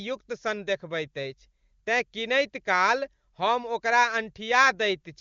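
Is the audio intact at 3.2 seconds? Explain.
Yes, the speech at 3.2 seconds is intact, carried by the AMR wideband (HD Voice) codec at 23.85 kbit/s, a rate high enough that the codec leaves at most faint traces.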